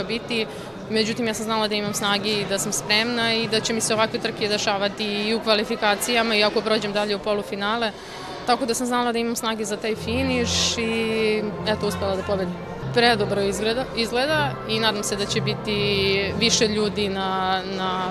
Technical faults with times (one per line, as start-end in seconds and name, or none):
none